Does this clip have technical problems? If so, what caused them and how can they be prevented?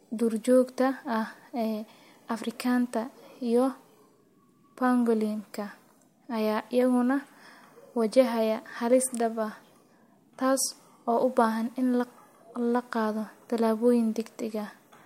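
Yes. Sample clock jitter runs through the whole speech clip. The converter's clock wanders by around a microsecond, so each sample is taken slightly early or late. The error scales with how fast the waveform is changing, giving a fine hiss or roughness roughly 40 dB below the speech that swells on loud and bright sounds such as sibilants. Unlike a steady noise floor, it disappears in the pauses. Prevent it by clocking the converter from a stable, low-jitter source.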